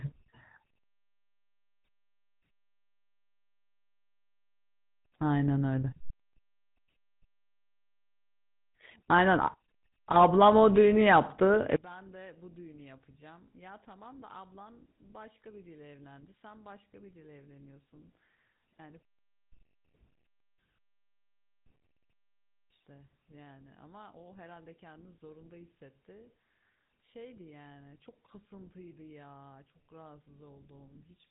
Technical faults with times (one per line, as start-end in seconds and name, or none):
0.00-31.31 GSM full-rate codec
11.76-31.31 one channel inverted